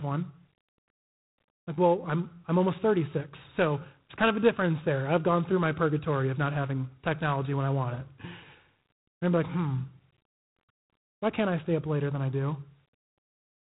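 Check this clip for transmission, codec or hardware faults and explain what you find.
The speech carries one codec fault throughout. It shows G.726 ADPCM damage. Each sample is coded as a coarse difference from a predicted value. The rasping hiss rises and falls with the speech, which fits the 24 kbit/s mode. Nothing passes above 3.9 kHz, so it sounds dull.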